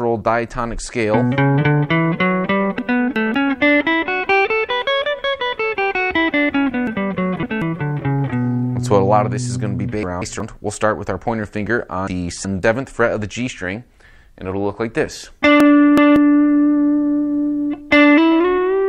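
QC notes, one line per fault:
2.79–3.34 s, 6.87–7.62 s, 10.03–10.40 s, 12.07–12.63 s and 15.60–16.16 s: chunks out of order. In each span a block of audio about 186 ms long plays late, after the blocks that should follow it. It lands two blocks late in the first, fourth and fifth spans, three in the second, and one in the third. No audio is lost, but the sequence is scrambled and three hard joins are created, so each span sounds jumbled.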